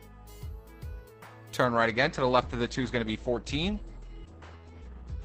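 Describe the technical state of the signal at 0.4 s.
No fault can be heard at 0.4 s; the signal is intact at that moment.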